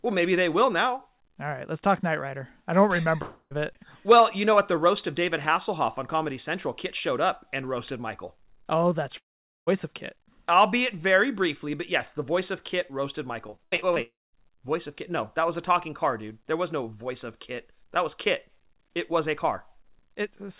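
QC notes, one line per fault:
3.22–3.55 s: long network dropout, likely cause; after "I don't", about 0.28 s lost, masked by a fading buzz, then brief silence; waveform shows a decaying tail then a flat gap.
9.17–9.69 s: long network dropout, likely cause; half a second missing, short concealment buzz then roughly 0.46 s of silence; spectrogram shows a blank vertical band.
13.47–13.98 s: repeated packet loss (robotic sound), seven short gaps up to 81 ms patched with repeated sound, over a third of the span; choppy texture, spectrogram striped with smeared repeats.
14.02–14.35 s: long network dropout, likely cause; about 0.32 s lost just after the robotic stretch, buzz then roughly 0.21 s silence; waveform shows a decaying tail then a flat stretch.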